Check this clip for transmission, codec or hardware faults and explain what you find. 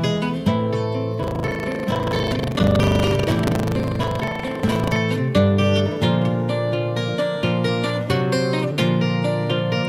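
Buffer tearing runs from 1.2 to 4.98 s: writer and reader cross inside each 40 ms period, so about a fifth of every buffer replays audio roughly 150 ms old. This gives a 25 Hz rattle that follows the signal, unlike an underrun's silent gaps.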